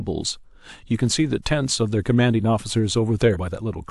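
At 3.32 s, compressed frames skipped: about two 46.4 ms frames never reached the output, so the speech jumps ahead.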